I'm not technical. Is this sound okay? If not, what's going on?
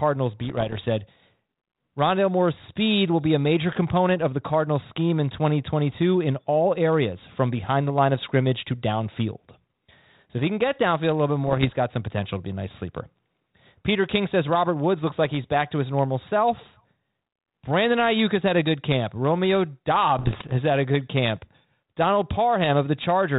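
No. There are bit errors on an ADPCM link, heard as pops and rough bursts at 0.44 to 0.79 s, 11.47 to 11.76 s just after "downfield a little bit", and 20.19 to 20.54 s just before "had a good camp." Flipped bits throw off the decoder's tracking, so each burst roughs up the speech for a moment.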